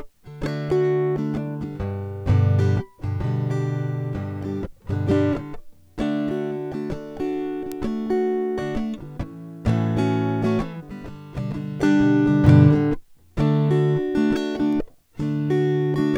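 At 7.72, 12.47 and 14.73 s the music picks up a bit error spike: a flipped bit knocks one sample (two at 14.73 s) off by a power of two before snapping back. Each is a lone broadband tick, loudest at about -10 dBFS, then about -22 and -28 dBFS.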